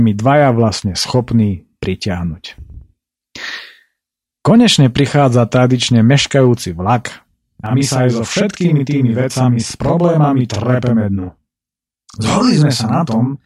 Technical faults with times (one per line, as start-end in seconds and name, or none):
7.66-13.46 channel delay (doubling)